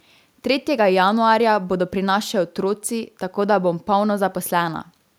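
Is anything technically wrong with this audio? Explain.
No, nothing stood out as technically wrong when listening to this speech clip.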